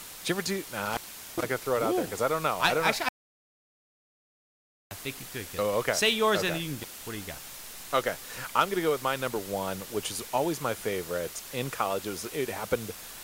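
Low bit depth with dither runs through the whole speech clip: the audio sounds like about 6 bits, and dither turns the rounding error into a steady, even hiss sitting high under the voice, with no distortion. Intermittent contact breaks the line twice. From 0.86 to 1.44 s, after "ever do" and before "gonna throw it out", the sound is open for about 0.41 s with crackle at both edges. From 6.80 to 7.06 s, after "okay and you can", it is open for about 0.17 s. Audio dropout to silence runs from 3.09 to 4.91 s: after "don't actually" there is 1.82 s of dead digital silence with no room tone before "think you could get". This is likely from the input being lost while recording continued.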